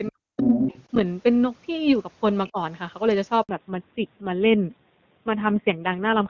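Right at the start, from 0.08 to 0.68 s, the talker's speech gets pushed way down, around 40 dB at its deepest, and it's affected for about half a second in total. That's most likely speech suppressed in double talk: both ends were talking at once, and the echo canceller couldn't tell the local voice from the loudspeaker echo, so it squashed everything.

Overlapping that, from 0.44 to 0.84 s, a second voice comes through, only a little quieter than the main talker, roughly 5 dB down. It sounds like the other side's voice leaking through: the far end playing on the talker's loudspeaker and getting back into the mic. The echo canceller likely didn't strip it out, so you hear it sitting right on top of the ducked near-end speech.

There's a second, much shorter dip at 2.51 to 2.58 s, lasting about 70 ms and only around 15 dB deep. It's likely the same double-talk suppression, just a brief duck rather than a proper dropout.

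At 3.43 s the audio dies away quickly and stays silent for 60 ms until 3.49 s. That's a handover gap: the phone switched networks, no speech frames arrived during the switch, and whatever was said in that window is simply gone.

Right after the gap, from 3.49 s to the end, there's a fallback to narrowband. The call drops from AMR-WB at 23.85 kbit/s, which sounds clear and open before this point, to AMR-NB at 7.4 kbit/s. Nothing above 4 kHz survives, so the speech suddenly turns duller and rougher.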